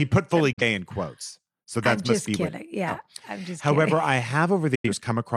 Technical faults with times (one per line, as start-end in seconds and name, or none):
0.53-0.62 digital broadcast dropout
4.75-4.90 digital broadcast dropout